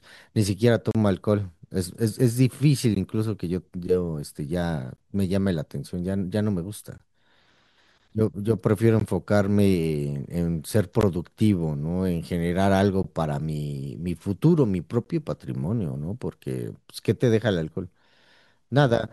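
Gaps at joins of encoded pieces break the speech at 0.91–0.95 s (35 ms), then 16 ms dropouts at 2.95, 4.96, 6.98, 9.00, 11.01, 13.03 and 15.04 s, roughly every 2 s. Unstripped encoder delay and padding leave vertical stripes with smeared edges on the spectrogram and notches in the waveform.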